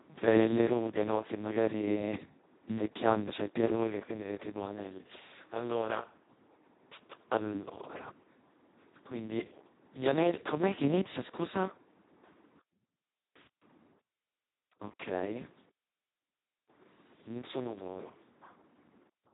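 From start to finish the speech carries heavy Speex codec damage, with a hoarse, buzzy, near-robotic quality that fits a rate near 2 kbps, where too few bits remain to model the excitation. A spectrogram shows smeared harmonics and an empty band above 3.8 kHz.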